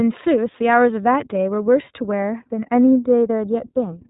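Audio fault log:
Throughout: iLBC codec. The top end stops dead at about 3.8 kHz, so the speech has that thin narrowband phone quality, and the codec damage is plainly audible as a rough, slightly synthetic edge on the voice. iLBC codes each short frame's excitation on its own rather than building on the previous one, and the texture here fits 20 ms frames at around 15.2 kbps, which trades some naturalness for robustness.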